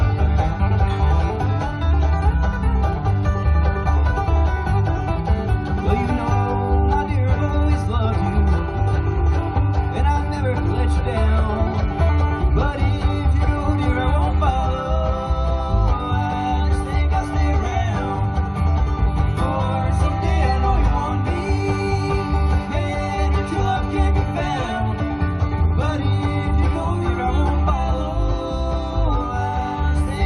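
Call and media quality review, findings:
Nothing stood out on listening; no findings to raise for this clip.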